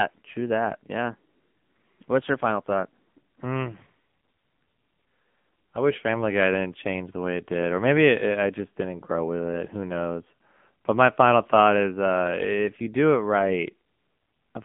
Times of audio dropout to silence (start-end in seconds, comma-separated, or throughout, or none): none